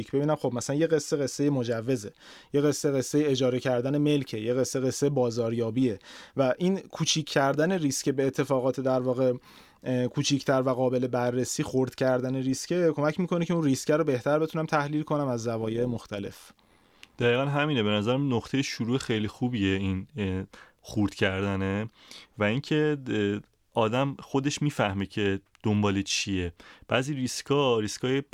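Overlap-add ripple runs through this speech recording from 15.62 to 17.24 s, heard as a metallic buzz laid over the talking. The audio in that stretch was split into windowed frames and rejoined with an overlap whose window gains do not add up evenly, so the level swells and dips once per frame, by about 6 dB, at a rate of around a hundred times a second.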